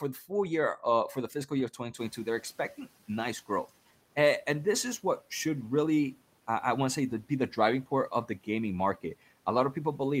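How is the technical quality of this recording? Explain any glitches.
One glitch stands out: a brief spell where the noise suppressor is catching up, starting just after "the fiscal year of" and ending before "nice growth". From 1.99 to 2.84 s, the room noise jumps by about 23 dB around the 2 s mark, to about 27 dB below the speech, and the suppressor's noise estimate lags behind that jump. So for about 850 ms the noise passes through with little reduction before the suppressor adapts and pulls it down by about 8 dB. On a spectrogram this looks like a sudden band of noise that appears bright, then visibly dims over that stretch. On the waveform, the noise floor between syllables rises abruptly, then shrinks.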